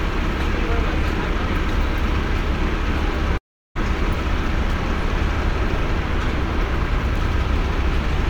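Long network dropout from 3.37 to 3.77 s in this recording of sounds: a brief fading continuation gives way to about 0.35 s of silence, likely lost packets, and roughly 0.38 s of sound never returns.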